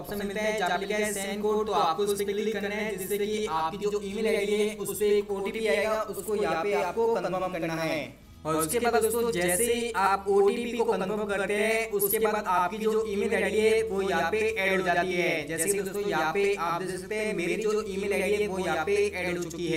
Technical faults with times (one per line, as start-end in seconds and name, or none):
0.00-19.76 channel delay (doubling)